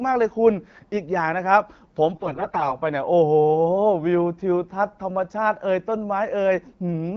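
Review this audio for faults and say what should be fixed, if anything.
From 2.14 to 2.73 s the speech turns hoarse, scratchy and gargly while roughly keeping its pitch and level. These are AMR bit errors: about a fifth of the weakly protected bits in each frame arrive flipped, so the excitation pulses land in the wrong places and the fine pitch, gain and spectral values are wrong. The checksum over the critical bits still passes, so the frames are decoded anyway. The surrounding AMR wideband (HD Voice) coding sounds clean and is consistent with the 12.65 kbit/s mode. To prevent this, strengthen the radio link or switch to a more robust codec mode with stronger channel coding.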